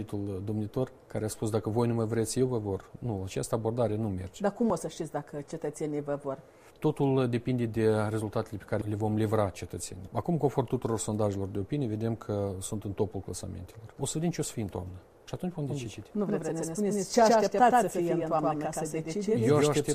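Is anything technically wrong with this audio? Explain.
Yes. From 15.69 s to the end, a doubled audio track appears. A second copy of the sound, at roughly the same level, trails by about a tenth of a second. It starts abruptly and has no decay or room colour. It likely comes from a slower second capture path or two misaligned copies in an edit.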